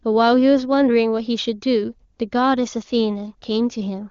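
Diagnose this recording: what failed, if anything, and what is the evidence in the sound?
Nothing failed in this recording, and the sound gives no evidence of any fault.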